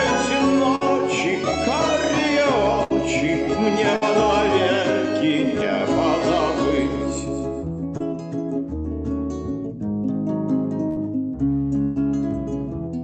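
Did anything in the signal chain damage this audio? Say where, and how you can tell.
Yes, at the network stage. Bursts of packet loss occur at 0.75–0.83 s, 2.83–2.92 s, 3.96–4.03 s, 10.90–10.98 s and 11.82–11.97 s. Each of the first four times, several consecutive packets arrived too late or not at all, so the receiver stretched the last sound into a decaying held buzz or hiss, about 55–65 ms long, then resumed past 40–60 ms of lost audio. The worst is at 11.82 s, where a 136 ms fill covers a 140 ms hole with no silence.

A short concealed packet loss occurs at 7.97–8.02 s, also a network fault. About 20 ms of audio failed to reach the decoder in time, and the receiver covered the gap with a 24 ms continuation synthesised from the preceding sound before crossfading back into real audio. It is heard as a brief smear or wobble rather than a gap, and a very short sound in that span could be lost entirely.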